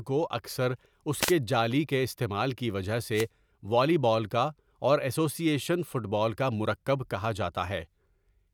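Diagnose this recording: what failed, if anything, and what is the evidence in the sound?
Wireless microphone noise hits at 1.19–1.34 s and 3.13–3.27 s: brief static bursts over the speech, from the analogue FM radio link fading as reflections cancel, raising receiver noise.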